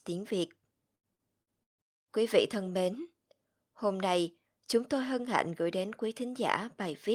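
From 0.95 to 1.81 s the speech breaks up with repeated packet loss, giving a robotic sound. Four gaps fall in quick succession, the longest about 152 ms, and each is papered over by stretching the last bit of sound, so roughly a third of the stretch is concealment rather than real speech. Unlike a single dropout or a steady codec artefact, the choppiness comes in a clustered burst with buzzy, repeated fragments between the holes.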